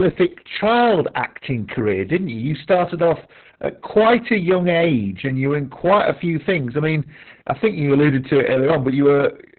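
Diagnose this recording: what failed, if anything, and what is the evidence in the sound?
The signal was driven about 10 dB past what a gain or conversion stage could pass, so every peak was cut flat. This hard clipping runs through the whole speech clip: roughly 7 percent of samples went over the limit, and the squared-off tops add harmonics that come through as a harsh, crackling fuzz on each louder syllable rather than isolated ticks. The overload was sustained, not a brief transient.

The codec stage is the second failure. Opus voice compression in its SILK linear-prediction mode was working at a very low rate, and the damage is heavy. Nothing reaches above 4.2 kHz, so the audio is narrowband and muffled, and the coarse coding of the excitation makes the speech hoarse and slightly robotic throughout. The degree of smearing fits a bitrate near 6 kbps, probably with long 60 ms frames.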